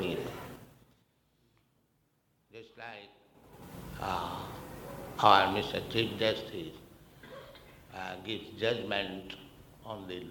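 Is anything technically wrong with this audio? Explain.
Yes. From 3.25 to 3.72 s there is zipper noise: a level change of around 25 dB applied unsmoothed in about 5 dB steps, roughly ten per second. Each step ticks, showing as a staircase envelope and thin vertical spectrogram lines.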